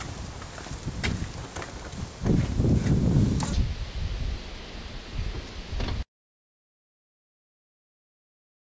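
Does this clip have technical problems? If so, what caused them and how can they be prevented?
Yes. From 3.53 s to the end, the sound has a wrong sample rate fault: it plays at half speed and drops a full octave (12 semitones), which fits audio captured at 32 kHz being played back at 16 kHz with no conversion. Speed and pitch fall together because every sample is held twice as long. On a spectrogram, all frequency content from that point shifts to half its height and time features stretch; on the waveform, events become twice as long. To prevent it, tag files with their true sample rate and resample explicitly whenever the playback or processing rate differs.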